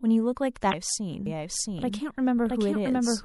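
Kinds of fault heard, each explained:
MP3 compression: Plainly audible watery, swirly treble and smeared consonant attacks throughout the speech, likely from low-bitrate MP3 encoding, which fits roughly 64 kbps.
Damaged data in a compressed stream: A brief chirp or blip from 0.70 to 0.74 s, where the decoder misreads corrupted frames and resyncs to the next valid header.
Doubled audio track: From 1.26 s to the end, a full-band copy at about equal level trails roughly 0.7 s behind, likely from a second, slower capture path.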